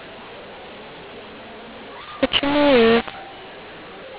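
From start to finish, telephone audio encoded with the mu-law curve is being decoded as A-law, a mu-law and A-law mix-up between the two G.711 companding laws. Because each 8-bit code maps to a different level under the other law, loud and soft samples are rescaled inconsistently and near-zero values land well above silence. The speech, band-limited below 4 kHz by the telephone coding, comes out harsh and distorted, with the gaps between phrases filled by noise.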